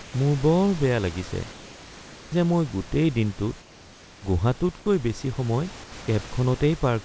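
At 0.02 to 0.14 s, 3.60 to 4.22 s and 5.84 to 5.92 s, the room background in the pauses gives way to comfort noise in place of the background, about 2 to 3 dB quieter, a flat, textureless hiss. Its likely cause is discontinuous transmission, with the receiver synthesising shaped noise while the sender is silent. On a spectrogram these gaps show smooth, uniform noise, still capped at 8 kHz by the call codec, and the waveform shows a slight level dip.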